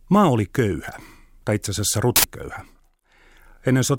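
At 2.16 s, right after "köyhä tai itse asiassa", there's an uninitialised buffer: an 80 ms block of leftover memory played as audio, giving a sudden loud burst of digital noise.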